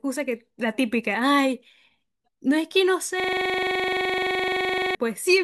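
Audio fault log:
3.2–4.95 s system hang loop: a 43 ms slice of speech repeats at 23.4 Hz as a machine-gun stutter while the system froze, which fits a 2048-sample ring buffer.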